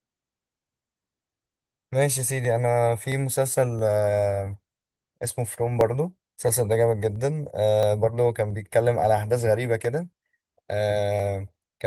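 Two devices in the chain are likely running on separate clocks that disagree by roughly a thousandth, so the buffer between them drifts until it must drop or repeat a short block, a few tens of samples each time. These clock drift buffer slips begin at 0.43 s and recur every 0.67 s through the end of the speech, about twenty in all, each heard as an evenly spaced click over the light Opus coding texture.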